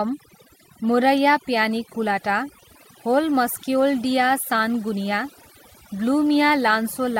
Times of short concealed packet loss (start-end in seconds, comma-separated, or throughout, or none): none